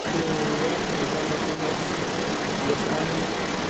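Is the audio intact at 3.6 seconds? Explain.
No. The other side's voice leaking through runs from 0.0 to 3.69 s, so 3.6 s is affected. A second voice sits at roughly the same level as the main speech, most likely far-end loudspeaker sound that the echo canceller failed to remove from the microphone signal.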